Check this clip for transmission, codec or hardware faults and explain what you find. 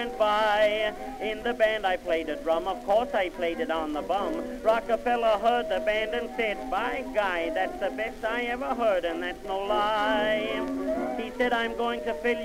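No transmission, codec or hardware faults can be heard anywhere in the clip. Nothing in the audio points to trouble in the chain that carried or captured it.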